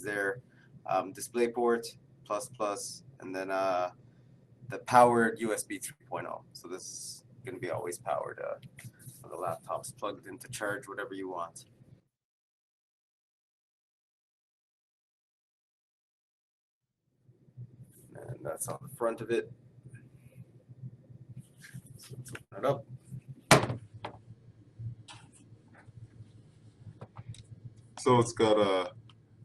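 The audio comes over a call link, with Opus-style coding noise and a band limit near 12 kHz. At 2.55 s there is a short concealed packet loss. About 40 ms never arrived, and the receiver stretched the preceding sound across the hole before blending back. It is heard as a brief smear. Bursts of packet loss follow at 5.91 s, 18.76 s and 22.44 s, each lasting roughly 50 to 80 ms. The receiver extended the last sound and let it fade, giving a held buzz or dying hiss. Playback then resumes with that stretch missing. From 23.58 s to the end, the audio is a section at the wrong speed. It runs at 0.893 times normal speed, so everything sounds slower and about two semitones lower. This is likely a clock mismatch in editing or playback.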